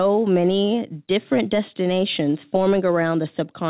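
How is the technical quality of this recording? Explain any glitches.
No glitches show up in the recording; the speech comes through a call path whose band stops at about 4 kHz, which fits a narrowband codec such as G.711 mu-law at 64 kbps.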